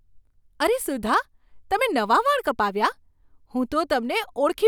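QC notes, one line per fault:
Nothing to flag here; the speech comes through without any problems worth a line.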